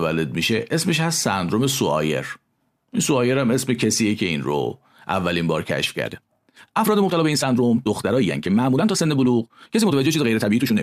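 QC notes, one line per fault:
6.01–10.83 s, time-stretched section: pace jumps to 1.81x at unchanged pitch, sounding rushed, likely from pitch-preserving compression. Spectrogram keeps harmonic spacing while syllables crowd together.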